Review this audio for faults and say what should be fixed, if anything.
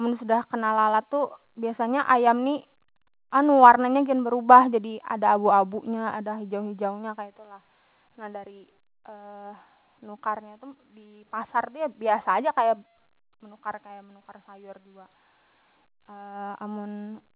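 Nothing in the recording needs fixing. The speech has passed through a call codec, and its top end stops at about 4 kHz, which fits G.711 A-law at 64 kbps.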